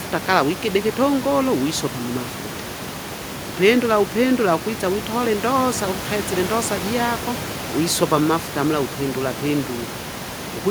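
Nothing goes wrong anywhere in this speech recording, and the only thing underneath it is a bit of the room's own background noise sitting about 12 dB below the talking.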